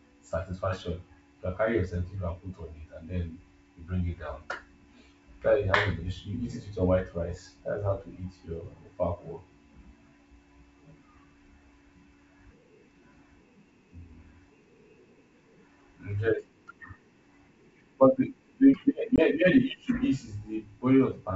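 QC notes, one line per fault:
19.16–19.22 s, packet loss on an ADPCM call: About one packet's worth of sound, some 20 ms, drops out as a hard-edged silent gap. Sound resumes slightly distorted, then settles within some tens of milliseconds. The receiving decoder's adaptive predictor and step size lost track of the sender's during the hole and needed tens of milliseconds to resynchronise. Around it, the G.722 wideband coding sounds clean, consistent with a 64 kbit/s stream.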